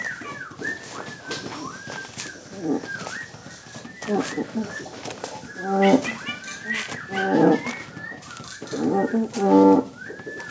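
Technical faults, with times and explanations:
No technical faults detected.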